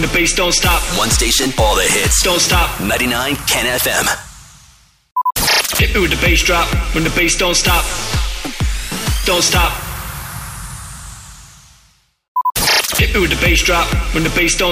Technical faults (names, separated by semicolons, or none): crude rate conversion